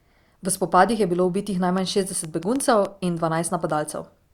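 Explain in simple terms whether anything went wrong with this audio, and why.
Right after "bilo ubitih", from 1.78 to 2.86 s, there's a train of clicks, about seven uneven pops, likely from interference or a faulty connection.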